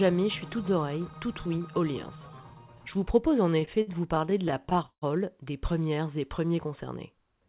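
From 3.5 to 5.04 s there's a run of repeated stalls (stutter): the jitter buffer kept running dry, so the receiver stretched the last sound through 16 short gaps, the longest 156 ms. Nothing's lost, but about a quarter of that stretch is filled-in sound, so it drags and stammers. All of this sits on a G.711 call path, which is why nothing gets through above 4 kHz.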